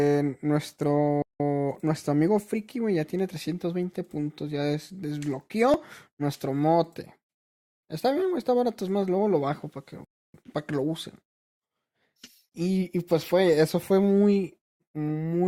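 At 1.22 s the speech drops out completely until 1.40 s, a playback stall of 176 ms. This is most likely the player running short of data or its output thread being held up. Its mark is a clear hole of silence.

At 1.75 s there is a tiny skip from an overlap between stream segments. About 6 ms of speech is cut away and the waveform jumps across the join. The same skip comes at 5.74 s, just before "nuestro mote", and at 9.73 s, just after "más luego lo bajo". The 4-second spacing fits segment boundaries whose time stamps overlap, so the player trims audio that was never duplicated. Unlike a stall, there is no silence, only a tiny skip forward.

A second playback stall runs from 10.05 to 10.34 s, a 293 ms gap before "para que lo usen". Again the sound goes silent.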